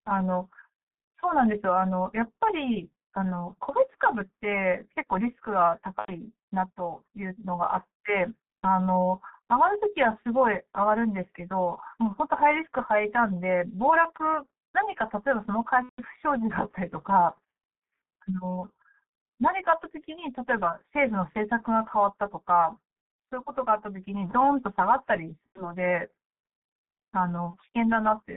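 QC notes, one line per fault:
throughout: G.723.1 codec. The speech is squeezed into a telephone band of about 150 Hz to 3.7 kHz, so everything above that is gone and the voice sounds muffled and boxed-in. At roughly 6.3 kbit/s the codec rebuilds each 30 ms frame from a coarse voice model that adapts slowly. Coding damage is heavy, with a hoarse, rough texture on voiced sounds and consonants that smear into one another.
5.99–6.11 s: VoIP packet loss concealed by the speech codec. About 90 ms of signal was not received, consistent with three lost 30 ms frames. The decoder repeats its last pitch and filter settings at falling gain, stretching the last sound to fill the gap until it is muted on the third lost frame. Because each frame depends on the state of the previous one, the speech sounds weak or distorted for a moment after the gap.
15.83–16.01 s: VoIP packet loss concealed by the speech codec. 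This is the longest gap, about 150 ms, which points to five consecutive frames lost. The extrapolated sound fades over the first frames and is muted from the third lost frame on. The speech stays thin and rough for a while after packets resume.
25.47–25.74 s and 27.51–27.57 s: VoIP packet loss concealed by the speech codec. Two further dropouts occur here. The first equates to about 90 ms of lost frames, followed by a sluggish return to normal level. The second is a single 30 ms frame.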